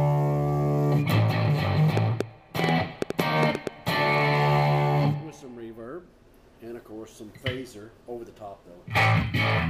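From 1.97 to 3.68 s a train of clicks sits over the sound: around ten similar sharp pulses at about 5.9 per second, unevenly spaced, peaking roughly 15 dB above the signal. The likely cause is interference from nearby equipment or a faulty connection or power supply.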